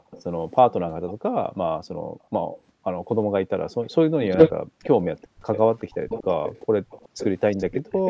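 Right from the start and running to 6.09 s, the room background keeps getting pulled down by the echo canceller: the background gating kicks in whenever the far end's loudspeaker is playing, and the ambience ducks by as much as about 40 dB, sometimes vanishing altogether, before creeping back once the canceller releases. Added up, it's roughly two seconds of chopped-out background scattered across that stretch, so the room sounds like it's breathing in and out.

Layered on top of that, from 0.11 to 1.14 s there's a faint delayed copy of the speech trailing about 370 ms behind, sitting well down, around 20 dB under the main signal. Then from 2.24 s through to the end it comes back much stronger, only about 10 dB below the speech and still 370 ms late. That's an echo leak, most likely the far side's loudspeaker being picked up by its microphone and its canceller not scrubbing all of it before sending it back to us.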